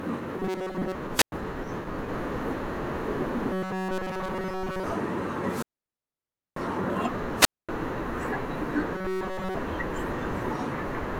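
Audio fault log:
0.40–0.95 s, 3.53–4.84 s and 8.94–9.56 s, robotic sound from repeated short buffers: the speech turns into a rigid metallic buzz at 188 Hz. This is likely caused by audio arriving too seldom, with the playback looping a tiny slice of about 5.3 ms to fill each gap while fresh audio is skipped. That loop length imposes the fixed pitch. The first and last stretches are mostly looped, and the middle one is entirely looped.
1.13–1.32 s, 5.45–6.62 s and 7.35–7.69 s, wireless microphone squelch dropout: each time, hiss or static swells as the FM radio link fades, then the receiver's squelch shuts the output. This leaves a hole of near silence lasting about 105 ms, 940 ms and 237 ms respectively. The speech then returns once the signal recovers. The long middle dropout swallows nearly a full second of audio.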